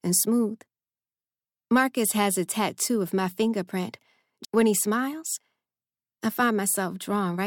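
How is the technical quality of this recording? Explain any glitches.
The speech has one glitch. At 4.44 s, just after "tattoo of my fingerprint", a stream segment was likely skipped when it failed to load, so the audio jumps abruptly ahead with a brief blip.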